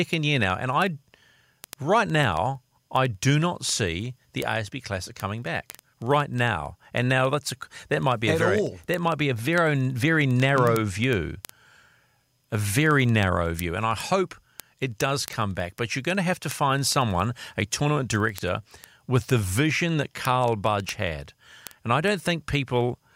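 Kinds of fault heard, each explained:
word clock ticks: an unlocked receiver clock slips one sample about every 0.05 s throughout, giving evenly spaced vertical spectrogram lines and single-sample waveform glitches.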